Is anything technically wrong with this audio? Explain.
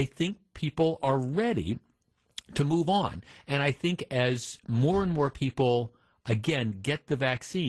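No, nothing is technically wrong with this audio.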